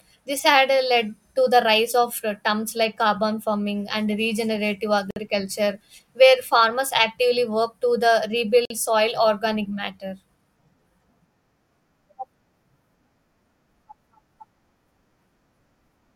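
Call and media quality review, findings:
Gap at a join of encoded pieces, encoder/concatenation stage: separately encoded speech segments joined untrimmed, so encoder start delay and last-frame padding remain. Silence, its edges smeared by the codec, interrupts continuous speech, which resumes where it stopped. 5.11–5.16 s (about 56 ms) after "carbon farming and regenerative"; 8.65–8.70 s (about 50 ms) between "actively work to the" and "soil organic matter".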